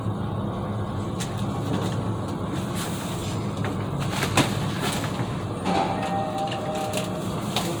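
The clip is a recording of sounds, and no technical fault can be heard anywhere in it. Nothing in the audio needs a timestamp or a cause.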